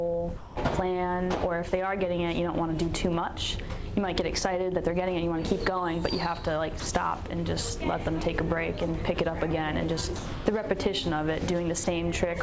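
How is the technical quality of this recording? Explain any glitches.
The recording has four short dropouts where the sound is swapped for steady hiss, all heard through a call-style path whose band stops at 8 kHz, which fits a wideband codec such as G.722.

The dropouts fall at 0.38 to 0.56 s (180 ms), 6.80 to 6.86 s (60 ms), 10.16 to 10.46 s (300 ms) and 11.84 to 11.87 s (30 ms). In each one the sound gives way to flat comfort noise and then returns. The likely cause is sound dropped by the voice detector: the sender judged those moments to be background and stopped transmitting, and the receiver filled the gaps with synthetic noise.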